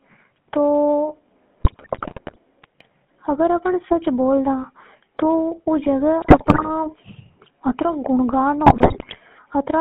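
Throughout, the speech carries the buzzy, gravelly roughness of the GSM full-rate codec, which fits a 13 kbps stream. A pulse-driven vocal-tract model rebuilds the voice inside a 150 Hz to 3.4 kHz band. The steady, even grit sets it apart from random hiss or clipping distortion.

GSM bit errors break in from 1.6 to 2.38 s, 6.22 to 6.70 s and 8.66 to 9.17 s. Corrupted filter, pitch and gain values cause squawks, pops and gargling bursts, with level jumps frame by frame, rather than the silences of dropped packets.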